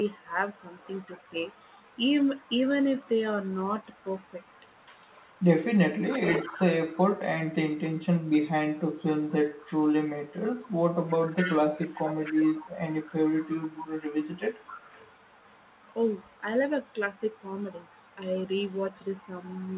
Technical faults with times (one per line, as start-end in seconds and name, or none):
1.07-1.31 speech suppressed in double talk
5.17-5.31 echo leak
6.10-6.62 echo leak
9.31-9.66 echo leak
11.08-13.88 echo leak
12.33-12.40 speech suppressed in double talk
14.22-15.11 echo leak